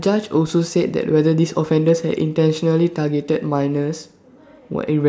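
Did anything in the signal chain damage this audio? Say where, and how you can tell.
No, nothing in the signal chain audibly damaged this speech recording. Listening through it, no stage from the analogue wiring to playback leaves a mark on the sound.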